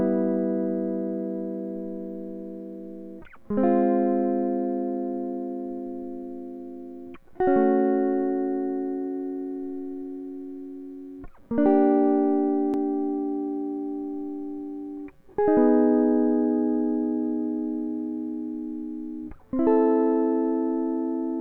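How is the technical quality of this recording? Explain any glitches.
The music comes through with no audible technical glitches in the signal at any point.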